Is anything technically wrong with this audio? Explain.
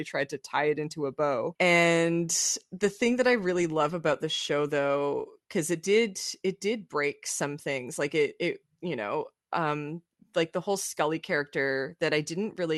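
No, nothing here is technically wrong: the speech comes through a normal call path whose Opus-style coding rolls the top end off around 12 kHz, which is ordinary for such a link rather than a defect.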